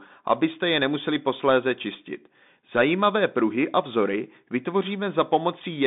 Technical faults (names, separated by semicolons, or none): Bluetooth CVSD headset codec